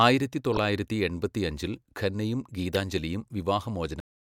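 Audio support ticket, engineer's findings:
Brief chirp-like burst at 0.54–0.58 s, about 40 ms, wrong-frequency energy over the speech. Decoder, corrupt frame decoded: flipped bits in a few compressed frames, played without concealment, so misread gains and codes land energy where the speech has none.

Second, shorter blip at 2.73–2.76 s, about 30 ms. Same fault, corrupt frame decoded, spanning roughly a couple of frames. Same decoder path, same mechanism: damaged frames rendered as noise instead of being dropped.

Speech stops abruptly at 4.00 s, mid-sound, into dead digital silence with no decay through to the end. Output stage, cut-off end: final buffers never written or played, so the tail is truncated rather than faded.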